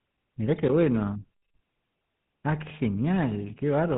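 From start to finish the speech has passed through the GSM full-rate codec. The coder reduces the voice to a vocal-tract filter excited by a sparse, regularly spaced pulse train, keeping only a third of the excitation samples. The result is a plainly audible buzzy, gravelly roughness in the voice. The band stops at about 3.9 kHz, leaving the voice dull and boxed-in, consistent with the 13 kbps rate of this early mobile coder.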